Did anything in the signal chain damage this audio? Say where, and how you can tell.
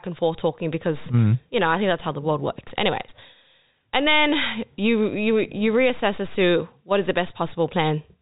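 No, nothing in the chain damaged this speech; the band stops at about 3.8 kHz, as expected from the G.711 mu-law telephone path it went through.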